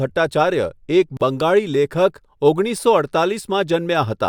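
At 1.17 s the speech drops out for about 40 ms, to 1.21 s: a gap at a join of encoded pieces. Separately encoded segments were butted together untrimmed, so encoder delay and end-frame padding leave a short silence with smeared edges before the speech resumes.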